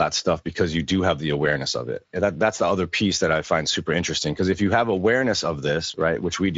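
From start to finish the speech carries Speex codec damage, and it's plainly audible. It has that noisy, hoarse grain you get when a CELP coder doesn't have enough bits to rebuild the excitation properly. The sound points to a mid-range wideband setting, roughly 17 kbps. Everything stops at 7.7 kHz, and the band above 4 kHz isn't real detail, just a shaped, hissy fill standing in for it.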